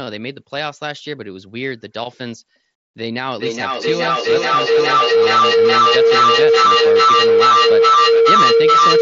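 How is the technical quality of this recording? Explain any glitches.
The big problem here is a feedback howl that takes over the back two-thirds of the recording.

From 3.36 s to the very end, a tone builds and keeps going. It sits somewhere around 500 Hz and throbs roughly every 0.4 s, peaking at about 12 dB louder than the speech. That's a mic-to-speaker loop: each pass comes back hotter, the repeats pile up instead of dying away, and everything collapses onto the one pitch the loop likes best. The throb is the loop's round-trip delay. Nothing breaks the loop, so the howl runs to the end.

Under that, you can hear the Bluetooth mSBC headset codec. The top end stops around 8 kHz, and there's a light grain on louder sounds, consistent with a bitrate of about 61 kbps.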